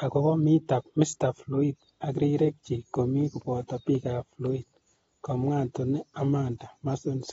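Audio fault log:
throughout: AAC compression likely: speech sounds dull and smeared, with a hard 7.7 kHz spectrogram ceiling fitting about 24 kbps.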